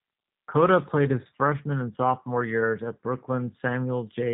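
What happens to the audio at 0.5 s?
At 0.5 s the speech carries G.729 codec damage, present throughout the clip. Rebuilt from a vocal tract filter and sparse pulses, it sounds rough and synthetic, not merely dull as a plain low-pass would, with nothing above 3.8 kHz, which fits 8 kbit/s G.729A.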